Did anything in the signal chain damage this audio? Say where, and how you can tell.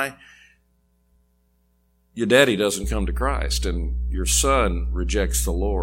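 Yes. The damage is in the analogue wiring. Mains hum appears at 2.84 s, just after "your daddy", and continues to the end of the clip. It is a steady low tone at 60 Hz, with some low harmonics above it. It sits at roughly the same level as the speech, so it is hard to miss. The hum switches on mid-clip, which fits a ground loop or a nearby transformer coupling the power line into the cabling at that moment.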